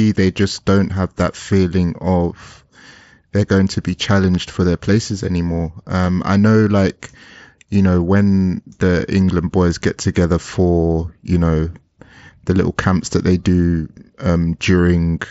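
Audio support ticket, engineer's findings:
No fault found in this speech clip; the Bluetooth mSBC headset path passes it as expected, with bandwidth up to 8 kHz.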